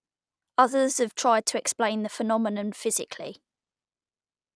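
Speech recording with no technical faults to report. Nothing in the signal calls for a timestamp or a cause.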